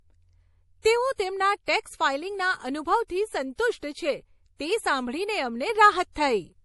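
Throughout, the speech sounds watery, with nothing above 11.5 kHz. This is likely MP3 compression, and the plainly audible damage fits a low bitrate near 48 kbps.

Pre-echo appears at 0.82, 1.65 (just after "તેઓ તેમના"), 3.07, 3.56, 3.78 (just before "છે તે સાંભળીને") and 6.12 s. Each time, a brief hiss of 23 to 43 ms comes before an attack and softens it. The codec spread its block noise into the quiet moment ahead.

At 5.70 s, just after "છે તે સાંભળીને", a sudden gain jump of about 4 dB lifts the speech and background together. The level stays raised to the end. A likely cause is a gain change applied without a ramp.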